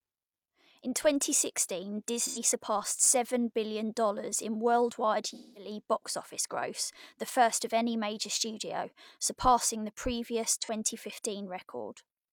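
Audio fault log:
2.25–2.39 s, AAC frame loss with concealment: an 85 ms patch turns smeared and noisy, which fits about two lost frames rebuilt from the last good spectrum. The spectrogram shows blurred, flattened harmonics across the gap.
5.34–5.70 s, AAC frame loss with concealment: a longer 213 ms gap. The repeated spectrum sags in level and sounds phasey. The waveform envelope dips and the spectrogram shows a smeared band.
10.62 s, AAC frame loss with concealment: a brief 43 ms smudge, about one frame, with a single smeared vertical slice on the spectrogram.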